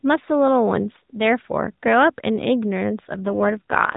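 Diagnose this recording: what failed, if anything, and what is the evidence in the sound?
The network pushed the AMR codec down to a lower rate, an AMR rate drop at the codec stage driven by the radio link. From 3.14 s to the end the speech turns buzzier and more synthetic, with no gap and no change in the narrowband 4 kHz ceiling. That fits a step down from the 12.2 kbps mode to about 5.9 kbps.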